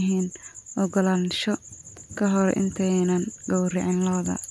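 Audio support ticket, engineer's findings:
No audible fault in the speech recording, and nothing points to any component in the chain.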